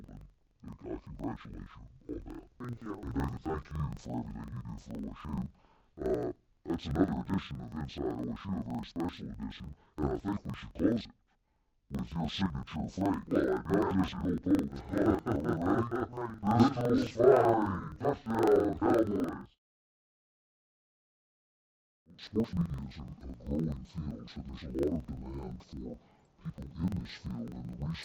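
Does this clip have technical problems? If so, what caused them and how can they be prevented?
Yes. The whole clip suffers from interleaved audio read as planar: each block of alternating left-right samples is being split into a first half and a second half as if they were separate channels. That stretches each half to double length, so everything sits an octave low and sounds doubled and choppy, with a flutter at about 23.4 Hz from the 42.67 ms blocks, which fits a 2048-sample block. To prevent it, make sure the reader and writer agree on sample layout, interleaved or planar, before any buffer gets handed across.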